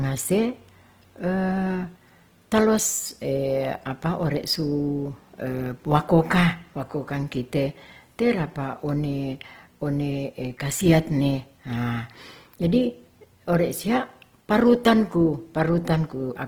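Opus compression runs throughout, from start to finish. The damage is plainly audible: the speech turns rough and grainy, with a noisy texture. The cause is likely Opus in its music (CELT) mode at a low rate, which fits around 16 kbps. The encoder keeps each band's energy but fills starved bands with noise or folded copies of lower ones, so there are few holes and little swirl. Bandwidth stays full, with content reaching up to about 20.2 kHz.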